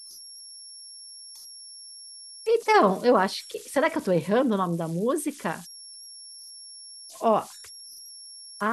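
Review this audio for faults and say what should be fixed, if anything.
Converter idle tones run throughout the speech. A tone near 5 kHz, about 21 dB below the signal, comes from an undithered delta-sigma converter cycling through repeating bit patterns. Enable dither in the converter to prevent it.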